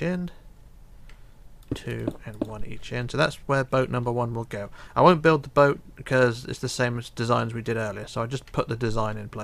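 A phantom power thump hits the audio at 2.60 s and has died away by 2.97 s: a deep, low-frequency thud peaking at about -20 dBFS and decaying in roughly 83 ms. Switching phantom power on a live input sent a voltage step through the coupling capacitors.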